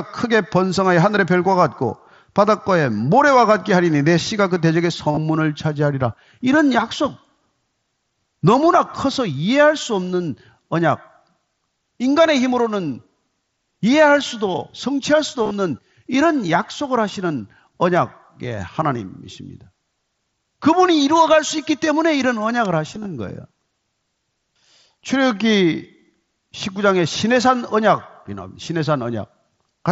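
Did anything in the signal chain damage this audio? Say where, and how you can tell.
Yes. Concealed Bluetooth headset packet loss on the wireless link at 5.11–5.17 s, 15.43–15.51 s, 21.57 s and 22.95–23.05 s. Missing packets are refilled with repeated recent waveform, which causes brief buzzy holds.

An electrical switching spike at 22.65 s is heard as a sharp snap on top of the speech. It was likely a nearby switch arc picked up by the analogue wiring.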